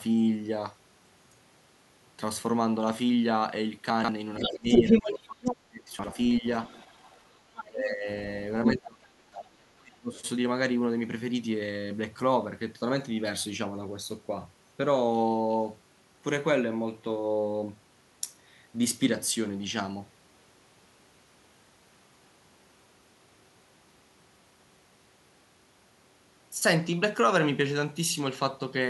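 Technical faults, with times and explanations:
3.90–4.09 s and 5.99–6.08 s, chunks out of order: both moments sound jumbled. Blocks of about 46 ms play in the wrong sequence. In the first, one block arrives three blocks late. In the second, a block lands one position late. No audio is missing, but the shuffled order breaks the flow, and each joint between mismatched blocks is a hard splice.
4.40–6.45 s, 7.65–8.08 s and 8.75–10.19 s, speech suppressed in double talk: the talker's level collapses in pieces, dipping by up to about 35 dB, 20 dB and 25 dB respectively, with roughly a second and a half, under half a second and around a second and a half affected. The likely cause is an echo canceller that cannot separate the talker from loudspeaker echo while both sides speak, so it turns everything down.
4.40–7.64 s and 8.65–8.71 s, other side's voice leaking through: a second voice is audible alongside the talker, about 5 dB louder than the talker during the longer stretch and appearing as a brief scrap at 8.65 s. 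This likely happens because the far end, played on the talker's loudspeaker, is picked up by the microphone and not fully removed by the echo canceller, so its leftovers stay in the signal.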